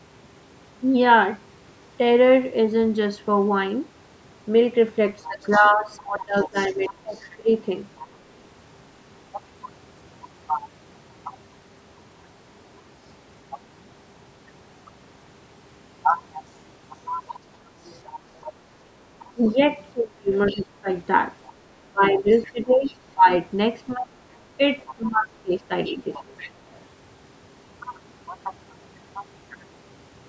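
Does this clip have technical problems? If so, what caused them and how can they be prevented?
Yes. A second, quieter voice, roughly 20 dB below the main speech, comes through from 5.23 to 8.07 s, 17.27 to 22.96 s and 24.79 to 26.81 s. This is the other side's voice leaking through, likely loudspeaker sound the echo canceller failed to remove. Unlike room crosstalk, it carries only the far end of the call. A headset instead of a loudspeaker prevents it.

While both sides talk at once, the main speech sinks in pieces, by about 20 to 25 dB at its deepest, between 5.27 and 7.5 s, 19.32 and 20.88 s, and 21.88 and 26.28 s. This is speech suppressed in double talk, likely the canceller turning everything down when it could not separate the talker from the echo. Unlike a network dropout, the dips come while the far side is talking. A headset or a better full-duplex echo canceller prevents it.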